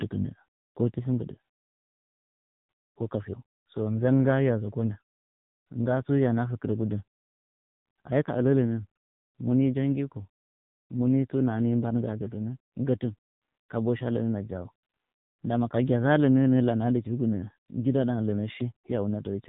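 AMR narrowband mobile codec, throughout: a vocal-tract model driven by sparse pulses leaves the speech heavily buzzy and synthetic, cut above 3.8 kHz, fitting about 6.7 kbps.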